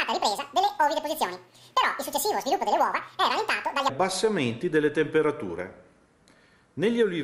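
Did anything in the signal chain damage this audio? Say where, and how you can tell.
Yes, a wrong sample rate at playback: from 0.0 to 3.9 s everything runs twice as fast and an octave high, which fits 24 kHz audio played back at 48 kHz.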